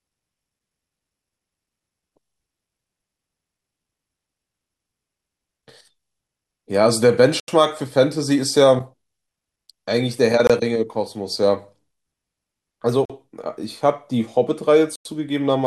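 The speech drops to silence four times. The first gap runs from 7.40 to 7.48 s, about 82 ms. Shorter ones follow at 10.47 to 10.50 s and 13.05 to 13.10 s. The last, from 14.96 to 15.05 s, lasts about 95 ms. Each is a clean cut, then the sound resumes. This is likely a Bluetooth stall. Radio interference delayed packets, the headphone buffer emptied, and playback paused until the resent data arrived.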